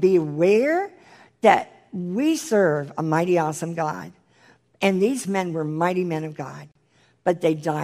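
The clip is speech with a gap at a join of encoded pieces from 6.72 to 6.75 s: about 37 ms of silence cuts into continuous sound. Separately encoded segments were spliced without trimming encoder delay and end padding. The edges are smeared, and the sound resumes where it stopped.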